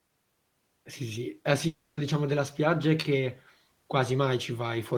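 At 1.67 s, right after "sì sì eh", the stream most likely suffered a long network dropout: for about 0.3 s no audio reached the receiver, and that stretch of speech was lost for good. The receiver covered the entire gap by extending the last sound, so what you hear until 1.99 s is a buzzy, fading continuation rather than silence. Speech then resumes at "diciamo della spiaggia è", with the missing portion simply skipped.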